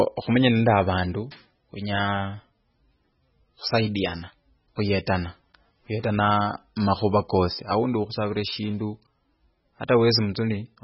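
From start to finish the speech has a heavily squashed, watery quality, with a swirly shimmer hanging on the sibilants and consonant onsets smeared soft. Nothing comes through above about 5.6 kHz, so the top end is simply gone. That's likely MP3 compression, and at a very low bitrate, something like 16 kbps. Starved of bits, the encoder chops the treble at a fixed point and lets weak frequency lines flicker in and out between frames, which is where the swirl comes from.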